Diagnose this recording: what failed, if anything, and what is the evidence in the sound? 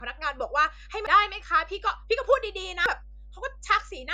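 A ground loop or nearby transformer in the analogue wiring has let the 50 Hz power line couple into the signal path, producing mains hum. It sits under the speech for the whole clip as a steady low tone at 50 Hz with a few low harmonics, roughly 20 dB below the speech level.

In the codec or storage stage, the compressed stream carries damaged data in two places, at 1.07 s and 2.86 s. At each point the decoder hits corrupted bytes, misreads or rejects the affected frame, loses sync and hunts for the next valid frame header. Each event is heard as a chirp, squawk, click or short hole in the speech.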